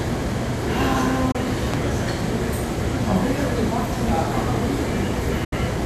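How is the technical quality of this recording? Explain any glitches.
The recording has two kinds of technical fault: brief digital broadcast dropouts and loud pops.

Digital broadcast dropout, at 1.31 to 1.35 s and 5.44 to 5.53 s: the receiver stopped getting decodable frames and muted until good ones returned. The sound fades out over about 8 ms, leaving gaps of 24 ms, which fits a single lost frame, and 72 ms, which fits three. The sound that fell in those gaps is gone.

Loud pop, at 1.74 to 1.76 s and 4.09 to 4.18 s: a sudden voltage step or pulse, likely from a connector, switch, static discharge or driver glitch, was added to the signal. The first is a single sharp pop standing well above the surrounding sound. The second is two pops in quick succession, somewhat quieter. In both cases the sound continues underneath.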